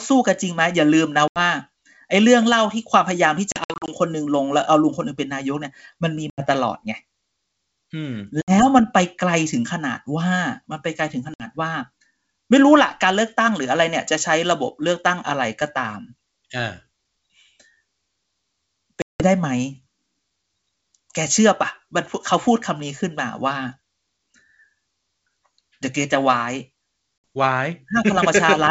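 Packet loss on an ADPCM call cuts hard-edged silent gaps at 1.28, 3.52 to 3.95 (scattered), 6.30, 8.42, 11.34, 19.02 and 27.37 s. These show as flat waveform holes and blank spectrogram columns. Each is followed by a brief, slightly distorted onset until the decoder's predictor resynchronises.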